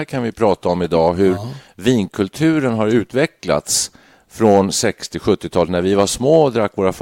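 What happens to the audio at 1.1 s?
Right around 1.08 s there's a brief burst of hard clipping, just before "hur ja". For a split second the speech peaks run about 1 dB past what the signal path can carry, so the tops of the waveform get sliced flat instead of rounding over. Those squared-off edges throw extra harmonics way up high, and with an overload this small you hear it as a quick crackle on the peak.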